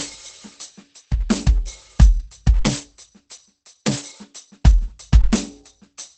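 Throughout, the music sounds muffled and hoarse, with nothing above 8.5 kHz. This is likely heavy Opus compression in speech mode, fitting about 12 kbps.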